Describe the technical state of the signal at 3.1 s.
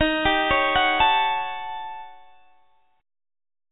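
At 3.1 s the signal is intact, with no dropout, glitch or distortion, only the narrowband call-path sound, with nothing above 4 kHz, that fits a G.711 telephone codec.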